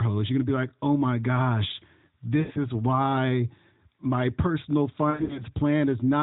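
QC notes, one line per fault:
2.40–2.59 s and 5.10–5.43 s, lost AMR speech frames: the first run falls between "like oh my gosh" and "is why my personal", the second right after "is why my personal". Each drags the last sound into a warbling smear that sags in level. This happens because the decoder repeats its last good pitch and vocal-tract settings with falling gain, so the gaps fade out rather than cutting off abruptly. The longest stretches, about 100 ms and 80 ms, fade furthest, and the voice then returns briefly weak or rough, over an AMR narrowband channel whose sound fits the 12.2 kbps mode.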